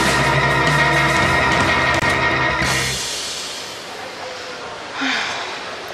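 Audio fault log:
1.99–2.02 s, digital broadcast dropout: the audio mutes abruptly for a brief hole of roughly 24 ms, then resumes mid-programme. The receiver discarded a corrupt or missing frame and silenced output until valid data returned, consistent with one lost frame; that material is gone.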